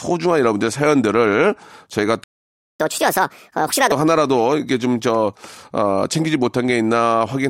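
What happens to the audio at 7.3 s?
Nothing goes wrong at 7.3 s: the speech runs on intact through that moment.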